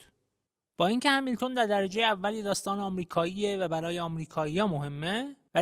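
At 1.76 s the speech suddenly loses quality and stays that way through to the end: codec artefacts become more obvious. There's no gap or dropout at the switch, just an abrupt step down. That's an adaptive stream at a lower bitrate, where the player dropped to a leaner version when the connection slowed. The sound fits a step from Opus at 64 kbit/s down to 32 kbit/s.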